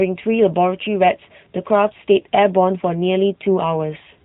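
From start to finish the speech has passed through the AMR narrowband mobile codec, resampled to 8 kHz and rebuilt from a vocal-tract model, at a moderate rate that fits the 10.2 kbps mode. Nothing above 4 kHz survives, so the voice sounds muffled and plainly buzzy and synthetic.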